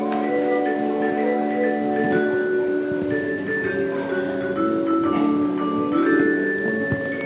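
No technical faults can be heard anywhere in the clip. It has passed through a call path, and nothing reaches above 4 kHz, which fits a narrowband telephone codec such as G.711 mu-law at 64 kbps.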